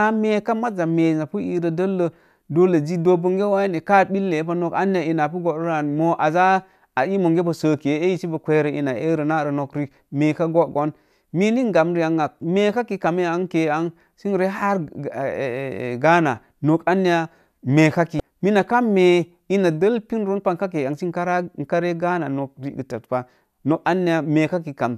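Speech, with one case of damaged data in a compressed stream at 18.17 to 18.20 s: a brief 30 ms burst where corrupted bytes make the decoder misread the frame and hunt for the next header.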